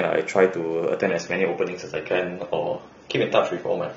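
An adaptive stream at a lower bitrate takes over at 0.99 s and runs to the end of the speech. With no gap, the sound abruptly loses its treble, with nothing left above 7 kHz, and codec artefacts grow more audible. The sudden step down points to the player switching from a rendition around 96 kbit/s to one near 24 kbit/s, as a slower connection forced it onto the cheaper encoding.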